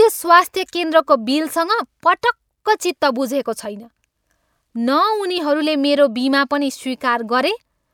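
No technical faults can be heard anywhere in the recording; the signal stays steady and intact throughout.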